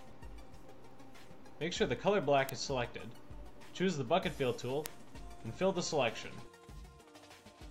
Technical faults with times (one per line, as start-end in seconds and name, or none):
0.13-7.49 word clock ticks